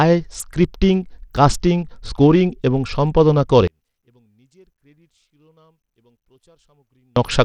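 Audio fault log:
Throughout: Bluetooth SBC compression, likely. Treble flickers and thins, with gritty quantisation noise on the speech, fitting a low bit pool around 80 kbps rather than broadband hiss.
3.67 to 7.16 s: one channel inverted, likely. After "কাস্টিং স্কোরিং এবং সম্পাদনা" the centred speech collapses by about 40 dB in mono, leaving only a faint difference signal, unlike a dropout.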